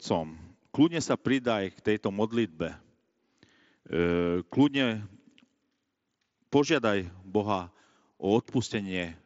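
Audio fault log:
No fault to log for this speech.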